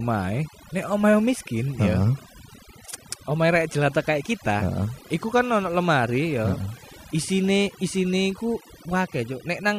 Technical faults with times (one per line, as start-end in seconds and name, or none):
0.00-9.79 overdone noise removal